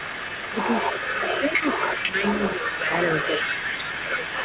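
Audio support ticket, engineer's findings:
Echo leak, full clip: far-end canceller likely failing to cancel its loudspeaker pickup, so the residual returns. Delayed copy of the speech trails by about 288 ms, only a few dB under the direct signal, over narrowband audio topping out near 4 kHz.

Speech suppressed in double talk: canceller likely mistaking near-end talk for echo during overlap and attenuating both. Speech dips about 5 to 10 dB, losing level in pieces at 0.51–0.56, 1.48–1.64, 2.03–2.22, 2.56–2.92, 3.23–3.71 and 3.95–4.39 s.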